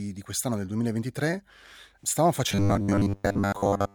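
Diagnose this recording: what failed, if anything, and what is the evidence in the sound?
Buffer stage. From 2.49 s onward, speech becomes a rigid 100 Hz buzz: robotic sound from repeated short buffers, likely 10 ms chunks looped.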